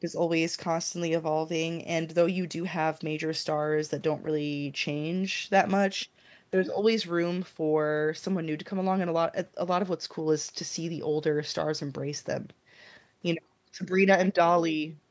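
Nothing stood out on listening to this speech; it has simply passed through a call's microphone processing, which trims the lowest bass and leaves nothing above 8 kHz, as that processing normally does.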